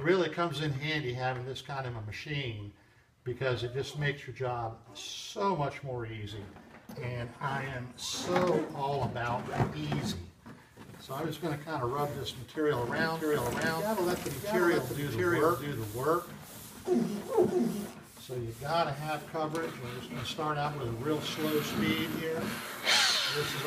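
Audio missing between chunks at 6.89 s and 16.86 s: two abrupt skips ten seconds apart, each dropping a few tens of milliseconds, likely lost while a 10-second chunk closes and the next opens. Doubled audio track from 13.15 s to 17.90 s: an equally loud, dry copy trails by about 0.7 s and starts and stops abruptly, likely from a slower second capture path.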